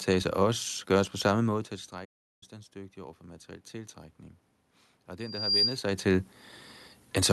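Just after "gøres på samme måde", from 1.9 s to 4.24 s, the speech and the room noise behind it swell slowly together, rising by about 4 dB over more than two seconds. This is automatic gain rising. The talker had moved back from the microphone, and the input fell by about 19 dB. The gain control then raised its gain step by step to recover the level, lifting the background along with the voice.

Within that rise, from 2.04 s to 2.43 s, the sound cuts out mid-flow into silence for about 0.37 s before continuing. This is a playback stall. The player most likely ran dry of buffered data, or its output thread was briefly blocked, so nothing reached the output until it caught up.

From 5.19 s to 5.79 s, just before "sig til", a single high tone at 4.8 kHz grows out of the audio over roughly a third of a second. It rises into a piercing whistle that sits well above the speech. This is loudspeaker feedback squeal. 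The microphone picked up the loudspeaker it was feeding, and at that frequency the loop gain passed one, so the tone fed on itself and kept growing.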